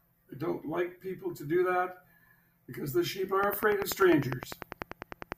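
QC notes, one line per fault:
3.44 to 5.33 s, train of clicks: a repeating pulse, likely interference from nearby equipment or a faulty connection or power supply, is getting into the signal path. The result is steady ticking, close to 10 clicks per second and evenly spaced, about twenty clicks in all, each with much the same sharp shape. The clicks stand out well above the speech, roughly 15 dB over it at their peaks, and carry on through the pauses as well as under the talking.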